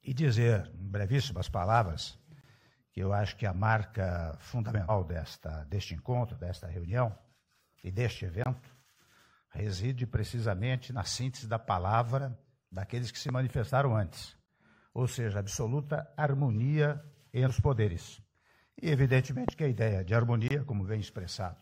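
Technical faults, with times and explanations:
2.41, 8.44, 14.46 and 20.48 s: gap between chunks. Each is a hole of about 23 ms. They fall every 6 s. That spacing points to audio delivered in 6-second chunks, with silence left at each join. No sound is lost. The flow simply stops and restarts.
4.88 and 17.46 s: compressed frames skipped. The audio jumps ahead at each point. At 4.88 s about 150 ms goes missing, roughly three frames. At 17.46 s about 100 ms goes missing, roughly two frames. The jump sizes fit a frame length near 46 ms, with whole frames never decoded.
13.29 and 19.49 s: loud pop. A single sharp pop sits on top of the sound each time. The first peaks about 15 dB above the signal. The second peaks about 20 dB above it. The sound carries on underneath both. Each is a sudden voltage step or pulse, likely from a plug, switch, static discharge or driver glitch. The following circuitry shapes that pulse into a short, hard transient.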